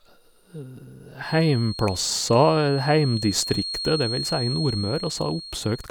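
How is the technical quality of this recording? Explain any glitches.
The recording has one fault. Feedback whistle, from 1.18 s to the end at 5.91 s: the likely cause is a loudspeaker-to-microphone loop sitting right at the edge of feedback, sustaining a single frequency without escalating. This is heard as a thin, steady 4.3 kHz whistle behind the speech, roughly ten decibels below it and swelling and fading slowly in level.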